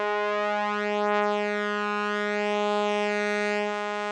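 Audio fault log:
Throughout: doubled audio track. The music plays twice, with a second full-band copy following about 0.7 s behind at a somewhat lower level. The copy has no decay or room colour. A slower second capture path or a misaligned edit is the likely cause.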